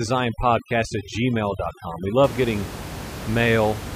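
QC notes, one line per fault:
0.00–2.24 s, overdone noise removal: aggressive reduction shuts off bands near its noise estimate. Background drops to twinkling specks.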